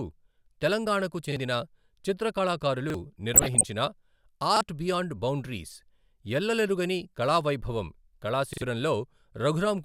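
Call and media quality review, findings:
Repeated buffer at 1.32 s, 2.90 s, 4.57 s (just before "బియాండ్ బౌండరీస్") and 8.53 to 8.62 s. Short stutter, one 43 ms segment replayed with hard joins, twice over at 8.53 s. Playback underrun, which fits a 2048-sample buffer. Roughly 40 ms of speech lost each time, about 100 ms at the last.

DAB burbling, 3.34 to 3.68 s. Short noise blips over the speech. Weak DAB reception let bit errors, roughly half a percent, past error correction into the MP2 data, putting short noise blips into single sub-bands across a run of 14 frames.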